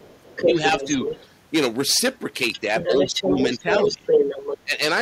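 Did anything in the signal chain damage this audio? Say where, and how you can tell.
Yes. Hard clipping runs through the whole clip at the converter or gain stage. The speech is driven about 14 dB past full scale, so a few percent of samples are cut flat. The flattened peaks add high harmonics, heard as a harsh fuzz on every loud syllable.

In call processing, the other side's voice leaking through is a second voice under the talker. It is heard at 0.00–1.27 s slightly below the speech, at 2.53–2.60 s well below, and at 2.76–4.58 s about level with it. The likely cause is loudspeaker echo that the echo canceller left in the microphone signal.

Speech suppressed in double talk shows as dips in the talker's level at 0.44–0.83 s, 3.07–3.35 s, 3.60–4.02 s and 4.62–4.76 s. The shallowest dip is a few dB and the deepest is about 20 dB. This likely comes from the echo canceller attenuating everything while both sides overlap.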